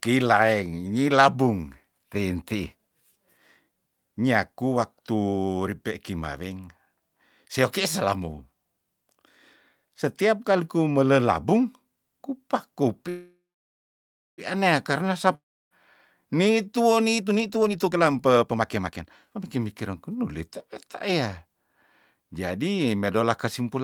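Call audio freeze, 13.09 to 14.41 s: the sound stops and the last fragment is stretched into a fading buzz, with about 1.0 s of silence before the audio picks up where it left off. The likely cause is delayed packets draining the jitter buffer. Nothing is lost, but the audio now runs about 1.3 s later.

Long network dropout, 15.35 to 15.74 s: a brief fading tail gives way to about 0.31 s of silence, likely because the packets never arrived. When the audio returns, roughly 0.36 s of material is gone, so it resumes further along.

Jitter buffer speed-up, 17.15 to 20.66 s: with the buffer holding more audio than its target, the receiver trimmed many short pitch-period slices in succession. The speech plays at 136% speed with unchanged pitch and sounds rushed, losing about one and a half seconds in total.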